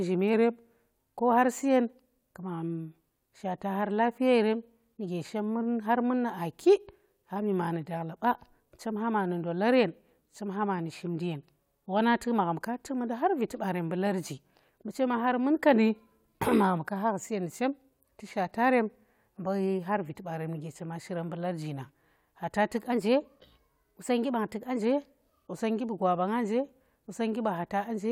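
From 0.34 to 0.98 s the speech slows by about 6% and drops roughly 112 cents, then snaps back. The same drift correction step recurs at 4.53 to 5.08 s (faster, about 105 cents sharp, ending just before "shemmun har mun nu"), at 15.74 to 16.36 s (slower and flat), and from 22.92 to 24.80 s (fast and sharp, right after "nang khata tuk"). The likely cause is a clock-matching resampler lurching its rate to rebalance a buffer. On a spectrogram the harmonic stack jumps down or up by about a semitone with hard edges, and the waveform's periods stretch or compress.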